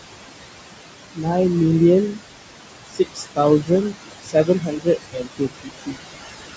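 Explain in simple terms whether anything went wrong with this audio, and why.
A noise suppressor is running through the whole clip, and it causes noise suppressor artifacts. The room's background noise sits fairly close under the speech. The suppressor pushes it down hard in every pause, then lets it back under each word.

There is also speech cut by the noise suppressor. In a few places it mistakes quiet parts of the speech for noise and turns them down too. This happens briefly at 1.14 to 1.27 s, for about half a second at 2.87 to 3.39 s, and briefly again at 3.61 to 3.71 s. The longest stretch runs from 4.22 to 6.08 s, where about a second of speech goes faint. Soft sounds and word endings there seem swallowed.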